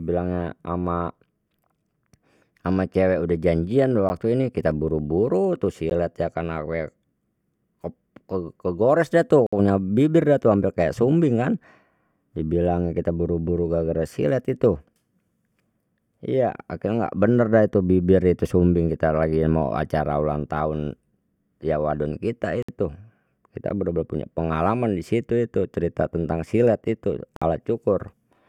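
Sharp ticks at 4.09 s (just after "cewek udah janjian"), 5.90 s and 23.69 s, and brief short holes at 9.47–9.53 s, 22.63–22.69 s and 27.36–27.42 s, are blocks of digital silence. The sound cuts out abruptly and back without fading, consistent with an output buffer left unfilled.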